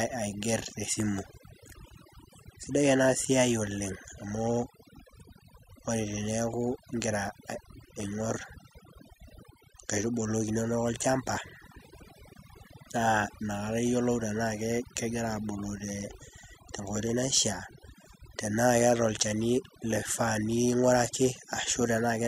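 From start to finish the speech carries overdone noise removal. A noise reduction stage was pushed far too hard, so any frequency band sitting close to its idea of the noise level gets pulled way down or cut out entirely, and the quieter parts of the voice get dragged under along with it. You hear it as a background that drops away and breaks up into little twinkling, warbling specks.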